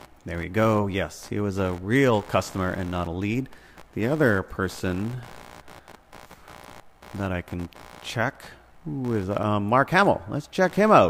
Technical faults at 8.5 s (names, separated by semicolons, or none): computer activity noise